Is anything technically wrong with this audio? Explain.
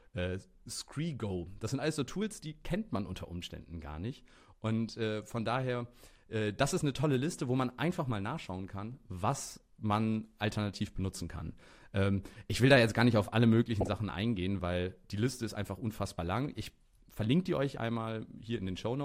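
Yes, there is DAB burbling in two places. Weak reception let bit errors slip past the error correction into the MP2 audio data, at a rate that sounds like well under one percent. Corrupted samples put short blips of noise in single sub-bands, and corrupted scale factors make sub-bands jump in level for up to a frame. This produces brief bursts of burbling over the speech. The first is a short blip at 3.51 s, after "die kennt man unter" and before "gar nicht". The second is a longer burst from 13.81 to 13.94 s, between "gar nicht auf alle" and "eingehen weil die".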